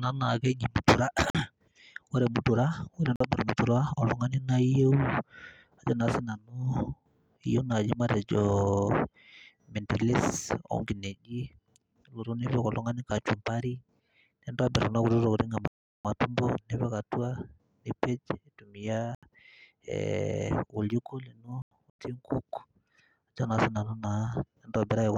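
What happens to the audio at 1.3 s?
A block of digital silence runs from 1.30 to 1.35 s, about 46 ms. For that stretch the audio drops straight to silence and then resumes, with no fade on either side, which fits a lost 2048-sample buffer. The speech is cut off abruptly and restored just as abruptly, and the gap is long enough to be heard as a brief hole in the speech rather than a single tick.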